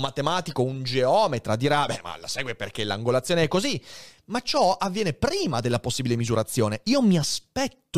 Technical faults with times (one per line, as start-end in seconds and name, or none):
none